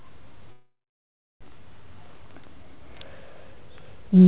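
From 0.52 to 1.44 s there is a call audio freeze. The last sound fades into 0.65 s of silence, likely from an emptied jitter buffer. Speech then resumes intact.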